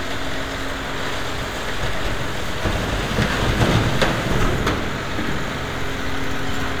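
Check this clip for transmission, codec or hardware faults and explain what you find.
Nothing here points to a transmission, codec or hardware problem; nothing drops out, stutters or breaks up along the way.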